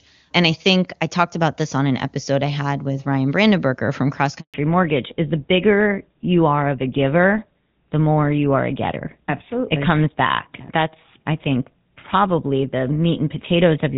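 At 4.40 s the speech fades out within a few tens of milliseconds and the line goes completely silent until 4.54 s, a hole of 140 ms. This is a handover gap: the call was being passed from one network to another, and no speech frames reached the receiver while the link was switching over. Whatever was said during those 140 ms is simply missing, and the voice only returns once the new connection is carrying audio.

From 4.54 s to the end of the recording the voice sounds duller and rougher, with all the crisp upper detail gone. Nothing remains above 4 kHz. This is a fallback to narrowband. Before the switch, the call ran on the AMR wideband (HD Voice) codec, which sounds clean here and fits its top rate of around 23.85 kbit/s. After the handover the call settled on the older GSM full-rate codec, which carries only the narrow telephone band. That lost top end is what takes away the clarity.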